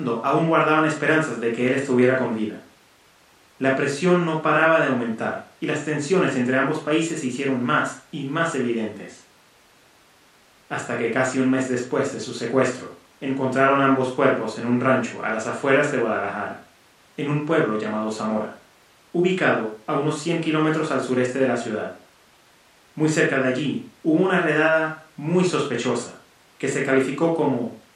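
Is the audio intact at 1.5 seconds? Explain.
Yes, at 1.5 seconds the speech plays through cleanly with no dropout, click, distortion or other fault.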